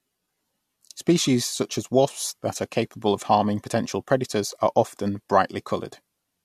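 No technical faults can be heard anywhere in this recording.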